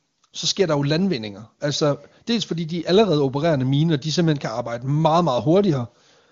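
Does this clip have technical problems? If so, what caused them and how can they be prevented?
No, the speech shows no technical problems; it has the full HD Voice bandwidth and smooth detail of wideband AMR at its top rate, around 23.85 kbit/s, with any coding damage faint at most, so nothing needs preventing.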